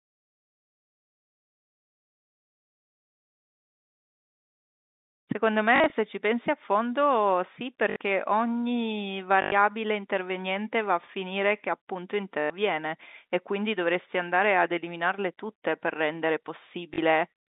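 Short robotic stutters, each a buzz, break the speech at 5.76–5.92 s (scattered gaps, longest 40 ms), 7.90–7.96 s, 9.42–9.52 s, 12.40–12.50 s and 16.94–16.98 s. This is packet loss with the last packet repeated. Lost packets were filled by replaying the previous one, and the repeats fall out of step with the pitch, so a run buzzes near 50 Hz, which fits 20 ms packets, over the G.711 telephone band of about 200 Hz to 3.7 kHz.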